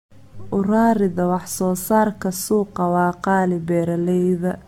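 Throughout, the speech carries generation loss: a swirly, hollow smear and blurred consonant attacks, with nothing above 17 kHz. The damage is heavier than one 96 kbit/s AAC-LC pass would leave, likely from re-encoding about seven times, each pass adding fresh artefacts.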